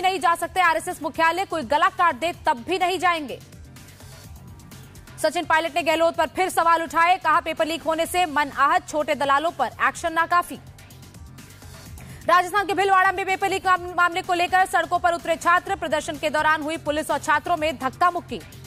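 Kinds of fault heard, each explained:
No technical faults can be heard anywhere in the recording; the signal holds steady and continuous throughout.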